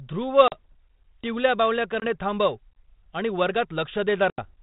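Hard-edged silent holes open at 0.48–0.72 s (40 ms missing), 2.00–2.07 s (20 ms) and 4.30–4.45 s (80 ms scattered over 120 ms). Each is followed by briefly distorted speech. This is packet loss on an ADPCM call: the G.726 decoder's adaptive predictor and step size drift from the sender's and take tens of milliseconds to resettle, with the underlying light coding damage fitting 32 kbit/s.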